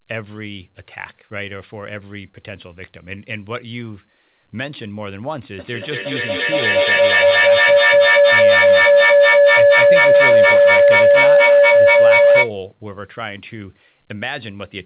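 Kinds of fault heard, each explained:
Feedback howl: 5.59 to 12.57 s, the loudspeaker-to-microphone loop gains each pass, swelling into a pulsing tone near 500 Hz, peaking about 16 dB above speech.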